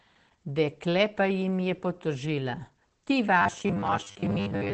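Opus voice compression runs through the whole clip. Nothing is heard above 8 kHz. The speech is muffled and slightly hoarse. That damage is plainly audible. It fits the SILK speech coder at a low rate near 12 kbps.

From 3.42 s to the end, the speech becomes a rigid, metallic buzz at 100 Hz. This is robotic sound from repeated short buffers, likely. About half the audio seems replaced by repeats. The pitch fits a 10 ms buffer.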